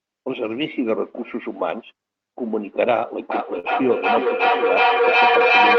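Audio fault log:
3.31–5.79 s, feedback echo between two devices: The sound returns roughly every 0.4 s, each pass thinner and more ringing, and the repeats build up to about 6 dB above the direct speech instead of fading. Two devices in one room are probably on this call, each microphone picking up the other's loudspeaker, which neither echo canceller removes.
3.59–3.67 s, short concealed packet loss: A brief smear or wobble sits inside the echo build-up, where about 40 ms of audio never arrived. The decoder bridged the gap by extending the preceding sound, then blended back into the real signal, so any short consonant there may be lost.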